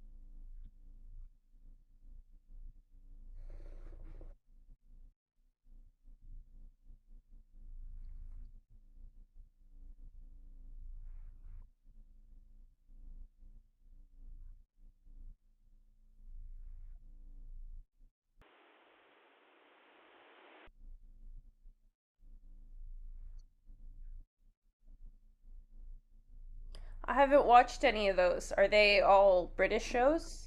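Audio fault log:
18.42–20.67 s: input switched to a poorer device. For these two seconds the speech turns dull and boxy, with nothing above 3.8 kHz and a new noise floor about 30 dB under the signal, likely from a change to another microphone or headset profile; a spectrogram shows the upper band abruptly cut off, level unchanged and no gap.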